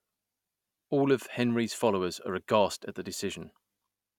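No audible faults present.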